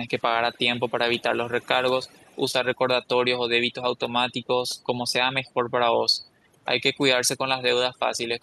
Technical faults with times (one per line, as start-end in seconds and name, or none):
0.00-8.42 overdone noise removal
0.14-0.24 echo leak
0.53-0.58 echo leak
0.88-0.92 echo leak
1.18-1.22 echo leak
1.50-1.67 echo leak
2.03-2.40 echo leak
2.51-2.55 short concealed packet loss
5.46-5.51 echo leak